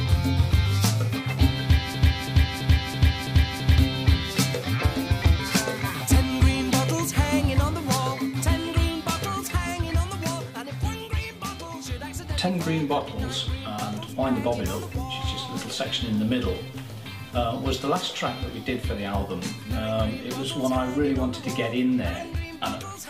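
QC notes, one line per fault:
1.94 to 3.78 s, broken-record loop: a chunk of about 0.33 s plays, then plays again and again, six times back to back, each pass identical, so you get that stuck, stuttering cycle rather than anything moving forward. Whatever audio belonged in that stretch never arrives. Most likely the player, encoder or stream stalled and kept pushing out the last fragment it had buffered until it caught up.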